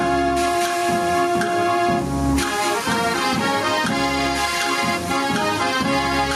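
Gain pumping runs throughout: the gain swings by roughly 5 dB under loud sounds, likely from excessive input gain driving a fast limiter, unlike a gate's abrupt cutoff.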